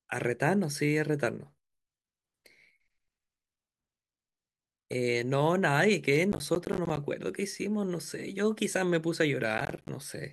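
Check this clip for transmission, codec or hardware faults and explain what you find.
One fault appears twice: processor overload crackle, at 6.32–6.97 s and 9.58–9.89 s. Missed processing deadlines leave roughly 10 ms silent gaps, heard as gritty crackle and seen as hard-edged waveform dropouts and vertical spectrogram streaks.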